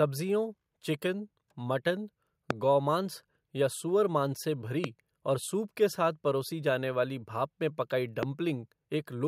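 Loud pops at 2.51–2.53 s after "चिकन मटन", 4.84–4.86 s after "गौमांस या सुअरमांस से", and 8.23–8.25 s after "में पकाई": single sharp cracks, the first about 20 dB above the speech, the others about 15 dB, with the speech continuing underneath. Each is likely a brief voltage pulse from a plug, switch or static discharge entering the signal path.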